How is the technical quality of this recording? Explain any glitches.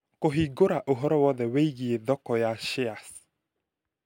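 The recording has one fault, sample clock jitter, from 2.56 s to the end at 4.06 s, just after "thoko ya". The converter's clock wanders by around a microsecond or two, so samples land slightly off-time. Steep, bright parts of the speech pick up a hiss roughly 30 dB below the signal. On a spectrogram this shows as a faint broadband haze that tracks loud, high-frequency energy and clears in pauses. The waveform looks essentially unchanged.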